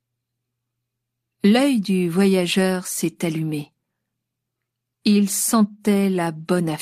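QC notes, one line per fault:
No faults found on listening; nothing to flag.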